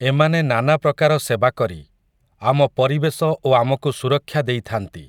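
No technical faults can be heard anywhere in the speech. With no events to place in time, there is nothing to describe in sequence.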